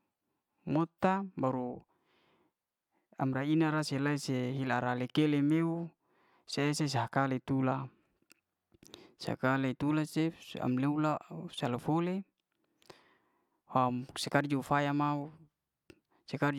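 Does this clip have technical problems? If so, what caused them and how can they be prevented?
No, the speech signal shows no technical faults at any point.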